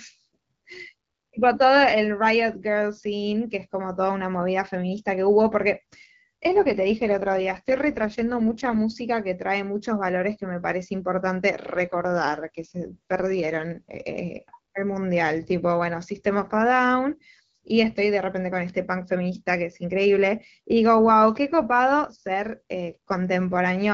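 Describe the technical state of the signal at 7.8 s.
At 7.8 s the speech sits inside an AMR rate drop (6.54 to 8.79 s). Bandwidth holds but timbre turns rough and synthetic, which fits a fall from 12.65 to 6.6 kbit/s.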